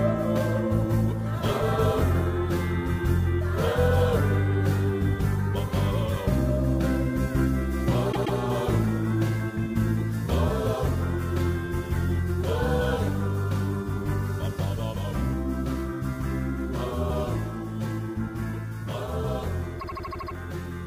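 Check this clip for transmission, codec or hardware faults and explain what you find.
Two stutters come from repeated frames.

From 8.11 to 8.37 s, a 130.6 ms stretch plays two extra times, adding 261.2 ms. That fits a run of five compressed frames being sent or written again, which the decoder then replays.

From 19.79 to 20.34 s, a 78.4 ms stretch loops seven extra times, adding 548.6 ms. That points to a run of three frames being duplicated.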